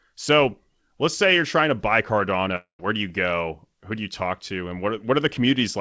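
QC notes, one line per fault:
2.56–2.81 s, long network dropout: packets likely stopped arriving after "you're trying to buy". The receiver stretched the last sound into a fading buzz for 0.23 s, then 0.11 s of silence. About 0.24 s of audio is lost before "do you go".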